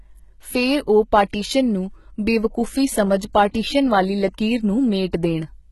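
Speech, likely heavily HE-AAC compressed throughout at a rate fitting about 16 kbps; the treble is replicated from lower bands, so s sounds turn gritty and metallic, with nothing above 11.8 kHz.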